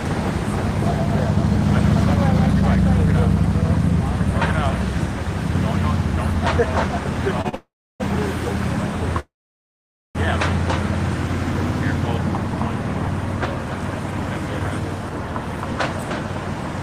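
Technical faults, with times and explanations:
7.41 to 7.47 s and 7.49 to 7.55 s, short stall from a late packet: the sound briefly sticks and is held too long, by 32 ms and then 41 ms, with a faint buzz or dip. A packet arrived late, so the receiver stretched the last sound until it came, then resumed from the same point with nothing lost.
7.55 to 8.02 s and 9.20 to 10.17 s, call audio freeze: the sound stops and hangs as a brief fading buzz or hiss that drops to silence, for 450 ms (about 300 ms of it silent) and then 952 ms (about 860 ms silent), before resuming exactly where it left off. The likely cause is packets delayed in transit, which emptied the jitter buffer and inserted a gap into the audio.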